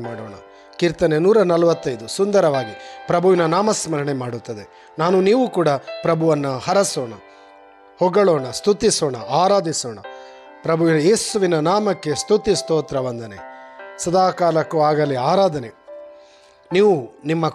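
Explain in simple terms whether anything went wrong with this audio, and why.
Nothing went wrong here.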